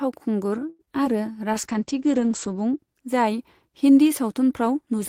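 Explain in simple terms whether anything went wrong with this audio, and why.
A few things go wrong early on, all typical of a shaky internet call.

At 0.69 s there's a short stall from a late packet. A chunk of audio arrived late, so the receiver stretched the last sound for about a tenth of a second until it showed up. Nothing is lost, but that sound hangs on too long and everything after it runs slightly late.

Right after, at 0.85 to 0.89 s, there's a short concealed packet loss. About 20 ms of speech never made it, so the receiver patched the gap by carrying the previous sound forward. You'd hear a tiny smear or wobble there.

From 1.53 to 2.85 s there's a call bitrate drop. The connection looked congested, so the sender squeezed the speech into far less data. For about a second in the middle the voice turns muffled and a bit rough, losing its crisp top end above about 8 kHz, before clearing up again.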